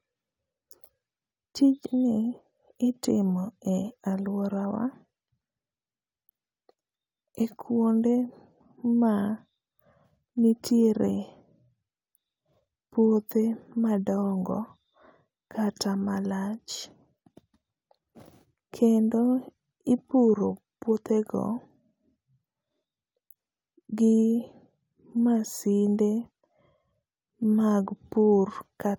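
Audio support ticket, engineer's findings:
No faults found on this recording.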